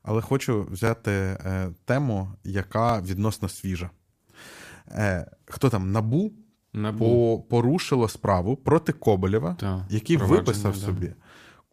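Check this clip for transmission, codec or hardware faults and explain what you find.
The speech has overlapping chunks at 0.87–0.89, 2.89–2.91, 4.91–4.93, 6.93–6.95, 8.95–8.97 and 10.97–10.99 s. The audio is handled in 2.0 s chunks, and each chunk restarts 20 ms before the previous one ended. That replayed slice causes a regular click or stutter at each join.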